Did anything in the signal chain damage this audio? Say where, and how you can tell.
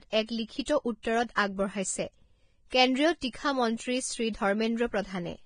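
Yes. Throughout, the audio is hissy and grainy with nothing above 9.7 kHz. The likely cause is heavy Vorbis compression at the codec stage, which fits a low bitrate near 23 kbps.

Pre-echo, also from the codec, appears at 0.65–0.68, 1.03–1.05, 1.35–1.37, 2.70–2.72 and 3.33 s. Block-wide quantisation noise leaks ahead of sharp onsets as a 10 to 25 ms hiss.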